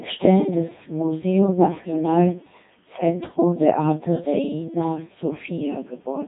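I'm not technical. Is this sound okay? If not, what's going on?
No. The whole clip has gone through a Codec 2 vocoder, a low-rate digital radio system. It keeps only the pitch and rough shape of the speech. Then it rebuilds the voice from tones. So it sounds heavily robotic and buzzy, with nothing above 3.7 kHz.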